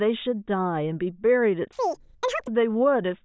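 From 1.73 to 2.48 s, the playback runs at double the rate the samples were captured at, with no conversion. This is a wrong sample rate fault, consistent with 8 kHz material being clocked out at 16 kHz. Because each sample passes twice as fast, the speech in that stretch speeds up by a factor of 2 and rises a full 12 semitones, an octave, so it sounds squeaky and rushed.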